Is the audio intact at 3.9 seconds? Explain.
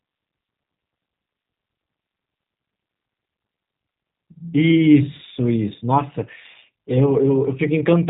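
No. At 3.9 seconds, as throughout the clip, the speech sounds rough, buzzy and synthetic with nothing above 3.8 kHz. This is G.729 codec damage, which fits 8 kbit/s encoding that rebuilds speech from a vocal tract filter and sparse pulses.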